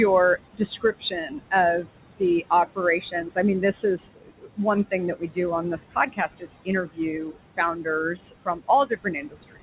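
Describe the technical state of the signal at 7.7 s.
At 7.7 s the signal sits inside a stretch of speech cut by the noise suppressor. That stretch runs from 4.91 s to the end of the clip. The suppressor has mistaken parts of the speech for background noise. It pulls them down along with the room noise, by up to about 21 dB at the deepest point. Soft consonants and word endings come out swallowed or faint. Quiet passages seem to drop away.

Noise suppressor artifacts are also present here, as they are across the whole clip. The suppressor works band by band, frame by frame, cutting what it judges to be steady noise by about 21 dB. The room noise, about 12 dB below the speech, therefore dips between words and swells back under them. The voice has nothing above 4 kHz on this call path.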